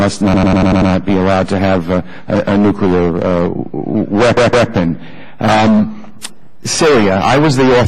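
The audio stutters twice: from 0.34 to 0.91 s a 96 ms block plays six extra times, and from 4.37 to 4.69 s a 160 ms block repeats twice more. These are repeated frames, compressed frames written more than once, adding 576 ms and 320 ms.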